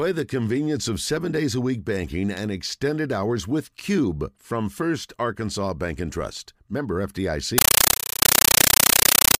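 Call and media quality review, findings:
Loud chattering static replaces speech from 7.58 s to end: compressed stream played as audio. 9.33 ms noise bursts at 31.25 Hz, consistent with undecoded AC-3 bitstream on the digital link.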